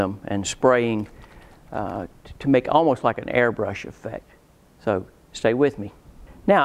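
Nothing stood out as a technical problem on listening to this audio.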